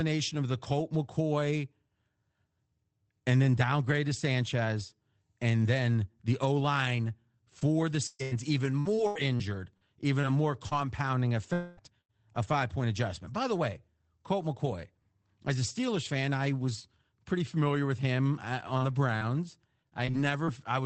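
Speech carried over an Opus call link, band-limited to about 8 kHz, which fits a rate near 24 kbps. Repeated packet loss (robotic sound) hits from 7.59 to 10.73 s. Ten holes appear, the longest 120 ms, about 480 ms lost in all. Each is patched by stretching the last sound, so the stretch turns choppy. Some holes, roughly a fifth of a second in total, come back as rough error-correction copies. From 11.53 to 11.79 s, the last sound is held and fades in place of about 240 ms of speech, with no silence. This is likely a long network dropout, too short here to decay to silence. A burst of packet loss follows at 12.01 to 12.11 s. About 80 ms are missing. The last sound is held and faded, then the speech jumps ahead. At 12.43 to 12.45 s, a lost packet is rebuilt from error correction. That 20 ms frame plays from a low-rate copy, so there is no gap, just a brief rough, noisier patch. Repeated packet loss (robotic sound) returns from 18.77 to 20.49 s. 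Seven short gaps, none over 38 ms, remove about 180 ms. Roughly 300 ms is rebuilt from coarse copies.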